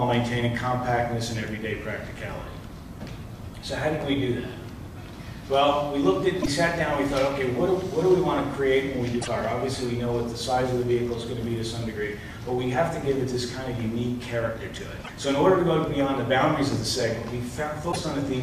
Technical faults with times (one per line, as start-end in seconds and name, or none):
6.39-6.48 damaged data in a compressed stream
9.18-9.28 damaged data in a compressed stream
15.01-15.10 damaged data in a compressed stream
17.88-17.96 damaged data in a compressed stream